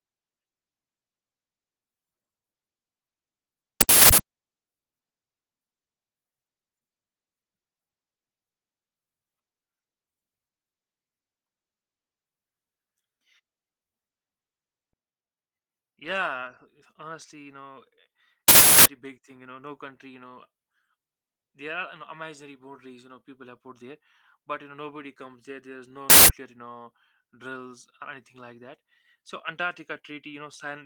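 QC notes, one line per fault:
3.81–4.18 s, 18.48–18.86 s and 26.10–26.29 s, uninitialised buffer: three bursts of loud, harsh digital noise cut across the speech. Each burst is leftover memory contents played as if they were samples, because the playback block was sent out before any audio had been written into it. The two 0.37 s bursts fit a 16,384-sample block, and the 0.19 s burst fits half that. The speech around the bursts is lightly coded Opus.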